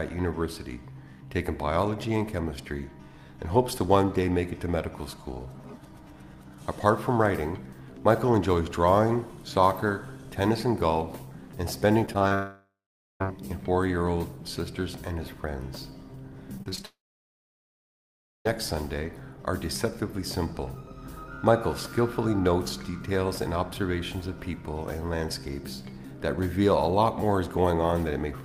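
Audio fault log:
12.05–12.32 s, repeated packet loss (robotic sound): four short holes, the longest 20 ms, are each patched by repeating the last sound. This gives a choppy stutter that shows as smeared, copied slices on a spectrogram.
12.34–13.22 s, long network dropout: the sound decays into a fading buzz, then goes quiet for about 0.47 s before resuming with roughly 0.86 s missing, likely because no packets arrived. The waveform shows a tapering tail and then a flat gap.
16.58–16.86 s, repeated packet loss (robotic sound): five holes up to 24 ms each cover about a third of the span with repeated fragments. This produces a broken texture, visible as vertical seams and blurred harmonics on a spectrogram.
16.86–18.47 s, long network dropout: a brief fading buzz gives way to about 1.5 s of silence, and roughly 1.6 s of audio never returns. The waveform shows a long flat stretch before the signal resumes.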